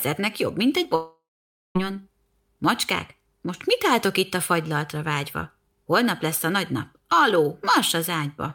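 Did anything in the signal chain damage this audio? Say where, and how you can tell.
Yes, at the network stage: a long network dropout from 0.95 to 1.77 s, right after "jobb mint egy". The speech turns into a decaying buzz, then about 0.52 s of silence, and resumes with roughly 0.8 s missing. This is likely lost packets with concealment extending the last sound.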